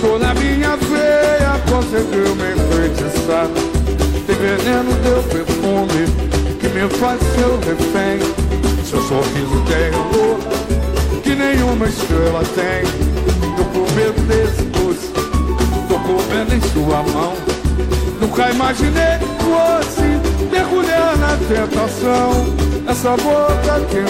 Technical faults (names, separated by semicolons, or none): none